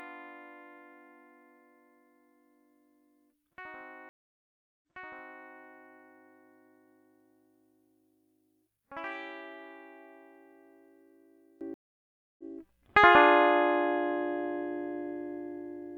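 From the start until 11.61 s the music sounds hollow and faint, about 22 dB down, its centre nearly gone; one channel inverted is the likely cause, cancelling shared content in the mono sum. At 4.09 s the music drops out for 0.73 s, then resumes 0.65 s earlier, repeating a passage. At 11.74 s a 0.64 s silence follows and the music returns about 0.7 s later. Both gaps are a stream reconnect, with the player restarting its decoder mid-stream.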